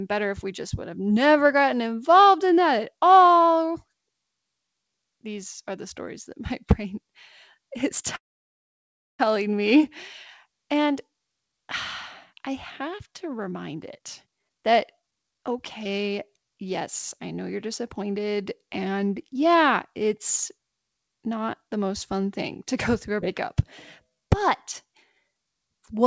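At 8.16 s the speech stops and resumes at 9.22 s, a call audio freeze. The gap is about 1.03 s, almost all of it silence (about 0.99 s), with only a brief tail of the last sound before it dies away. When the audio returns it carries on from exactly where it stopped, so nothing is lost and the delay grows by about a second. The likely cause is packets held up in transit, leaving the jitter buffer empty until they arrived.

Just after "I have to", from 13.39 s to 15.81 s, there is a jitter buffer speed-up. The receiver had more audio queued than its target, so it trimmed short pitch-period pieces again and again, removing roughly 0.7 s in total. Playback runs at about 131% speed with the pitch unchanged, and the speech sounds noticeably rushed over those two and a half seconds.

Right after that, at 15.84–15.88 s, comes a skip ahead. Roughly 70 ms of audio is dropped, and the two sides are butted together with only a sliver of fill, so the sound jumps forward abruptly. 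A second skip ahead follows "to go through a" at 23.21–23.25 s. This one loses roughly a tenth of a second, with an almost direct splice.

From 24.04 s to 24.44 s there is a jitter buffer slow-down. The buffer was building a reserve by repeating single pitch periods, adding about 77 ms. For that stretch the audio plays at about 83% speed at the same pitch, so sounds are drawn out and slightly stretched. All of this passes through a G.722 call path, which leaves nothing above 8 kHz.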